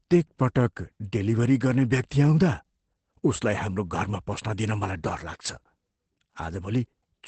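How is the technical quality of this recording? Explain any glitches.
The recording's quality is limited by plainly audible compression damage across the whole clip. Opus voice compression is present from start to finish. Its SILK coder models speech by linear prediction and codes the excitation coarsely, which fits a rate around 12 kbps. Nothing remains above 8.6 kHz. The speech sounds muffled, hoarse and faintly robotic.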